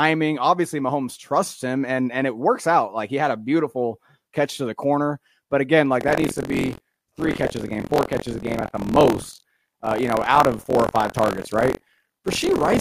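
From 5.99 s to the end of the clip, the speech takes on a robotic rattle at 43.1 Hz, the signature of buffer tearing. The write and read positions in the output ring buffer have drifted until they cross within each period, so roughly a sixth of every buffer replays audio from about 50 ms earlier, with hard splices at both edges. The buzz rate fits a 1024-sample buffer, and it sounds only while speech is present.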